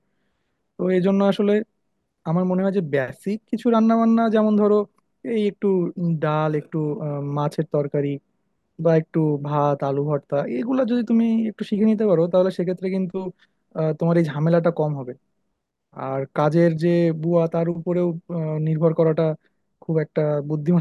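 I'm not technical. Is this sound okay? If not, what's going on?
Yes, this speech recording sounds fine, with no technical problems to point out. Nothing here needs fixing.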